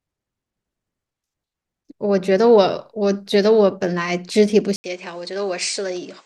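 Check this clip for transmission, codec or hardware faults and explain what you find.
One fault is audible. From 4.76 s to the end, after an 80 ms silence, the sound turns duller, slightly quieter, nothing above 9.3 kHz, with new background noise, likely an input switched to a poorer device.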